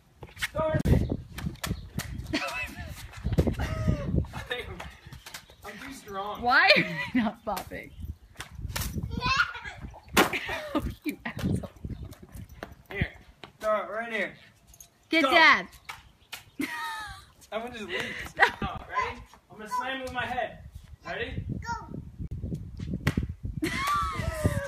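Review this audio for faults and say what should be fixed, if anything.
The sound cuts out completely three times: from 0.81 to 0.85 s (about 37 ms), at 18.78 s (about 19 ms), and from 22.27 to 22.31 s (about 37 ms). Each gap resumes as though playback had continued underneath. This is likely a Bluetooth dropout, where packets miss their delivery deadline and are discarded. The gap lengths fit one or two lost packets. A waveform shows flat-line holes, and a spectrogram shows thin, full-height blank stripes. Keep the headphones close to the source and clear of 2.4 GHz interference, or record over a wired connection.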